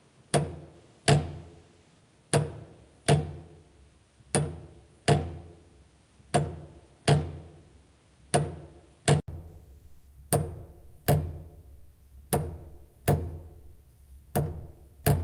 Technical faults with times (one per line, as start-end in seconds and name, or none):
0.00-9.28 input switched to a poorer device